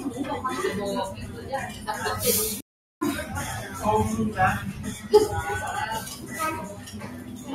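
A recording of everyday sounds has a speech-tuned noise suppressor left running on it. That is the noise suppressor applied to music or sounds fault. It reads steady tones, ambience and decaying tails as noise and pushes them down. Sharp onsets mostly survive. Held sounds and tails sink. The gain swings by roughly 10 dB through the clip. The result pumps and flutters, and the ambience keeps thinning out.

The suppressor also cuts specific sounds hard. Each is a sound cut by the noise suppressor. From 1.11 to 1.52 s the level dips by about 7 dB. From 1.68 to 1.88 s it dips by about 6 dB. From 6.15 to 6.32 s there is another dip of about 6 dB. The worst is from 6.72 to 7.51 s, falling about 9 dB. In each case the sustained part or its decay gets clipped short.

At 2.60 s the audio drops to silence for 0.41 s. It resumes at 3.01 s. This is a playback stall. The sound halts mid-flow and then carries on. 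The likely cause is the player running out of buffered data, or its audio thread being blocked until it recovered.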